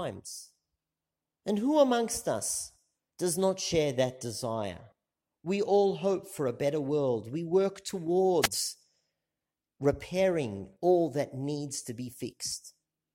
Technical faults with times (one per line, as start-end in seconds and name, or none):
8.41-8.48 wireless microphone noise hit